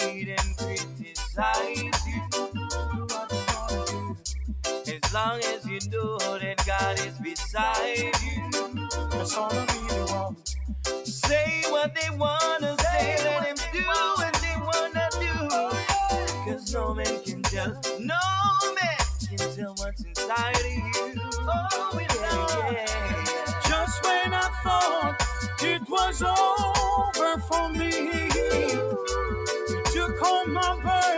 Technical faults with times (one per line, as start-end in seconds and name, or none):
0.84-1.15 sound cut by the noise suppressor